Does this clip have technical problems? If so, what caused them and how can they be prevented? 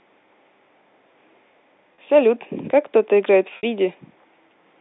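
Yes, there are two spots of packet loss with pitch repetition. At 1.95 to 1.98 s about 30 ms drops out, which fits a single lost packet. The receiver fills it by repeating the last pitch period, so you get a brief held, buzzy tone. At 3.57 to 3.63 s the 60 ms gap, consistent with two packets, outlasts the roughly 50 ms fade, so the repeat dies toward silence before speech cross-fades back in. The narrow telephone band from the G.711 line is audible throughout. To prevent it, cut loss on the network path and give the jitter buffer more headroom, or add forward error correction.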